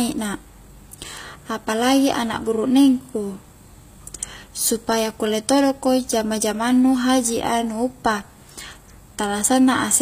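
Speech, marked throughout by HE-AAC compression. Sibilants sound gritty and metallic, likely from band replication at a low bitrate near 24 kbps. A spectrogram shows copied, mismatched treble harmonics cut off sharply at 15.5 kHz.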